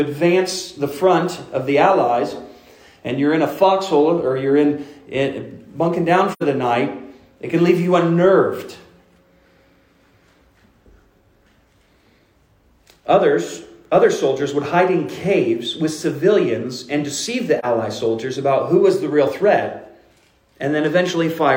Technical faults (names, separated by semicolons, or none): AAC frame loss with muting